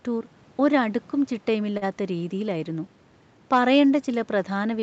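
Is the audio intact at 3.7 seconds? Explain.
No, not at 3.7 seconds. That moment falls inside a stretch of hard clipping running from about 3.53 to 3.81 s. The speech there is pushed roughly 4 dB past what the signal chain can carry, so the peaks get sheared off flat instead of rounding over. Those squared-off tops throw extra harmonics up the spectrum, which you hear as a gritty crackle riding on the louder parts of the speech for that quarter-second or so.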